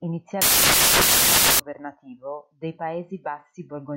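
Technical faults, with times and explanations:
0.42 to 1.6 s, samples built from the wrong bytes: for a bit over a second the reader stitches each sample's bytes together wrongly, so the jittery low-order bits land in the loud part of the value. You get a blast of harsh noise, close to white on the loud sounds.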